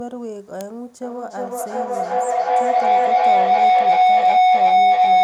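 At 0.61 s an electrical switching spike adds a single sharp snap on top of the speech, likely an arc from a nearby switch or motor coupling into the line. From 1.03 s to the end, a feedback howl builds as a microphone-to-loudspeaker loop gains level each pass, settling around 700 Hz, repeating roughly every 0.4 s and peaking about 16 dB above the speech.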